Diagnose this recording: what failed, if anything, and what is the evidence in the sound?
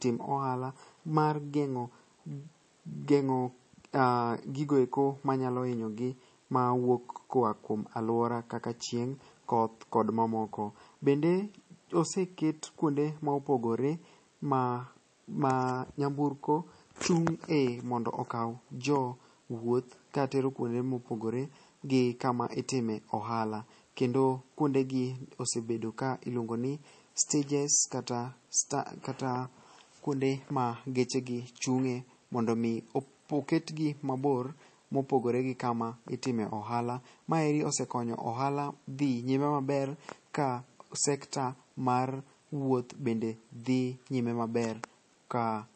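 The codec stage failed: the speech was likely squeezed through heavy MP3 compression, with damage plainly audible throughout. Nothing sounds above 8.3 kHz, and weak frequency lines flicker on and off between frames, giving a watery, swirly texture that points to roughly 32 kbps.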